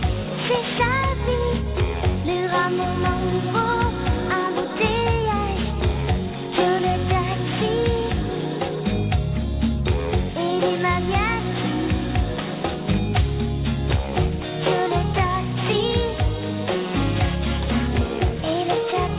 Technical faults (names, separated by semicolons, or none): aliasing